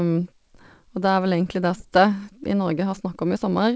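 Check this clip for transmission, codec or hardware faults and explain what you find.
Two faults stand out in this speech clip. Playback skips ahead once, and the speech that follows is sped up. The clip went through a call path. Its content stops at 8 kHz, which fits a wideband call codec such as G.722.

Skip ahead, at 1.80 to 1.82 s. Speech jumps forward with no gap. Around 0.7 s of audio is missing. Later audio was already waiting at the receiver. A chunk was dropped, on the way or by the jitter buffer when it overflowed, and the two sides were joined almost directly. The result is an abrupt cut, as if part of the sentence vanished.

Jitter buffer speed-up, from 1.90 s to the end. After the skip, the buffer still held more audio than its target. The receiver removed many short slices of one or a few pitch periods in a row. Together those slices come to about a fifth of a second. The speech runs at 111 percent of normal speed with the pitch unchanged. 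It sounds hurried.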